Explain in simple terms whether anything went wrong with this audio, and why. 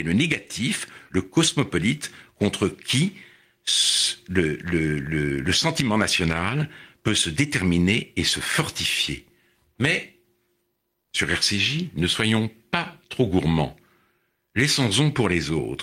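Nothing went wrong: the speech has no audible dropouts, glitches, distortion or other technical faults at any point.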